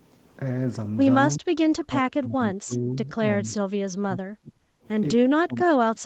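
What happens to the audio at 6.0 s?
The speech sinks sharply, by around 30 dB at its deepest, dulling and breaking up from 5.3 s to the end of the clip. This is speech suppressed in double talk, likely from an echo canceller that cannot separate this talker from far-end echo and turns both down.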